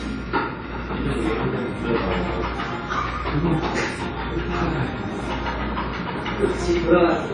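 A recording of everyday sounds, with plainly audible codec damage for its whole length. Nothing reaches above 10.1 kHz, so the top octave is missing and the sound is dull. Transients ring and smear, sustained parts sound washy, and a hiss rises and falls with the level. This is likely WMA compression, consistent with an early WMA encoder at a low bitrate around 32 kbps: long transform blocks spread quantisation noise over tens of milliseconds, and weak spectral lines are discarded.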